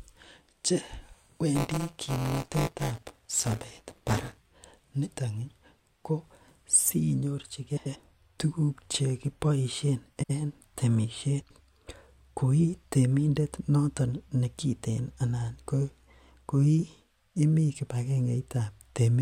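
Speech runs through two kinds of fault. From 1.55 to 4.39 s there is buffer tearing: a steady robotic buzz at about 172 Hz, which fits a 256-sample buffer read at that rate. The writer and reader of the ring buffer have drifted so they cross within each period, leaving roughly a sixth of every buffer filled with sound from around 20 ms earlier, hard-joined on both sides. Unlike ordinary clicks or dropouts, the rattle is continuous and pitched, and it rides only on the signal rather than leaving gaps. The second fault is frames out of order, at 7.76 to 7.96 s, 10.16 to 10.31 s and 11.41 to 11.61 s. In each, two neighbouring runs of frames were decoded in swapped order, which points to runs of three or four frames, so a stretch made of two halves of about 93 ms each, or 70 ms at 10.16 s, plays with its halves exchanged, producing a brief garbled flutter. What separates it from a dropout or a stutter is that nothing is missing or repeated and no time is lost. 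The sound is simply rearranged.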